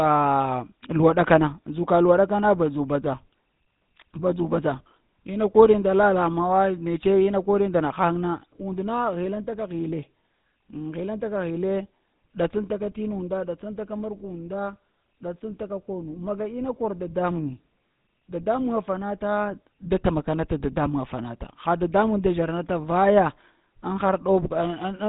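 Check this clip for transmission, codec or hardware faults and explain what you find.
The speech carries one codec fault, present from start to finish: GSM full-rate coding. Throughout the clip the voice has a buzzy, gravelly roughness, and there is plainly audible damage with nothing above 3.8 kHz. The codec models the vocal tract and drives it with a thinned-out train of regular pulses, retaining only a third of the excitation samples. That coarse excitation produces the grit, and the band-limiting removes sibilance and air. The damage fits a 13 kbps full-rate link.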